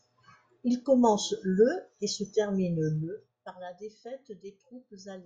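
This speech clip has zipper noise from 2.93 to 3.50 s: a fast ticking, zipping texture rides on the voice while its level falls by roughly 15 dB. The drop is applied in discrete jumps, around fifty per second, rather than as a continuous ramp, and each unsmoothed jump leaves a tiny click in the waveform. Strung together at that rate, the clicks become the buzzy zipper sound heard across that half-second.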